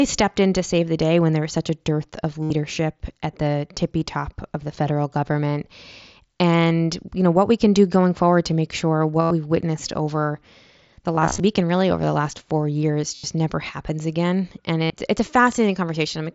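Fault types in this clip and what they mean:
Concealed Bluetooth headset packet loss: bursts of headset packets were lost, and the receiver filled each gap by repeating the best-matching recent stretch of waveform. Five spots, mostly 75 to 90 ms and one scattered over about 0.26 s, turn buzzy and tonal, warbling as speech resumes.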